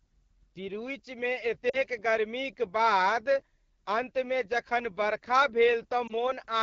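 Throughout, the speech carries AMR wideband (HD Voice) codec damage. It sounds rough and raspy, which fits the low 8.85 kbit/s mode.

At 1.69 to 1.79 s the voice drops to near silence, and at 6.07 to 6.38 s it gives a brief dip or warble, as lost AMR speech frames strike. The decoder repeats earlier settings with falling gain. The first gap of 40 ms suggests two frames, and the second of 20 ms suggests one.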